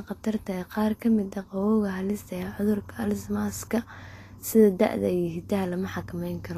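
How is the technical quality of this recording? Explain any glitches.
The technical quality is compromised by plainly audible codec damage throughout the speech. The clip sounds hissy and grainy, with nothing above 14.2 kHz, likely from Vorbis compression at a low bitrate, around 35 kbps, with coarsely quantised treble turned to noise.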